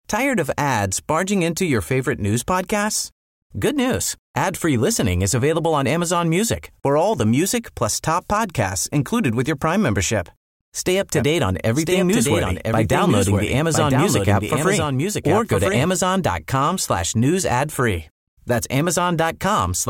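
From 11.16 to 15.86 s a doubled audio track appears: a second, somewhat quieter copy runs about a second behind, likely from a slower capture path. On the waveform and spectrogram it shows as a shifted duplicate with abrupt edges.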